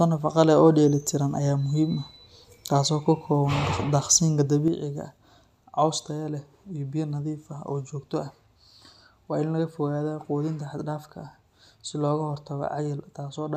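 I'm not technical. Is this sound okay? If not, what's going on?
No. At 4.68 s there's a sudden gain jump: the volume setting was likely changed in one instant instead of being eased in. From there to the end, the speech and the background noise both drop together to a clearly quieter level.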